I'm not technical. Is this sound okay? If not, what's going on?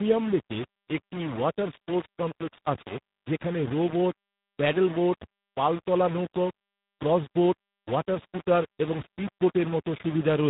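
No, there are two problems, and both run through the whole clip.

The speech has a grainy, gritty roughness that shifts as the talking changes, and quieter moments crackle instead of fading cleanly. That points to low bit depth without dither: the audio was likely squeezed down to only about 4 bits.

There's also tandem speech coding. The speech went through two phone-style speech compressors one after the other, each re-squashing the damage left by the previous one. The result is muffled, warbly and roughened, with nothing above about 3.8 kHz.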